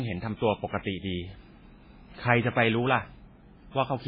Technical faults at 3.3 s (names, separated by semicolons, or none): MP3 compression